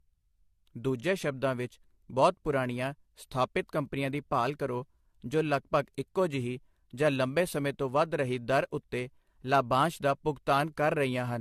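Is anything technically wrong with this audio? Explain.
Yes, there's generation loss running through the whole clip. The speech sounds swirly, smeared and hollow, with blurred consonant attacks and nothing above about 14.1 kHz. That likely comes from around five re-encodes through something like AAC at 64 kbit/s, each pass stacking fresh quantisation damage.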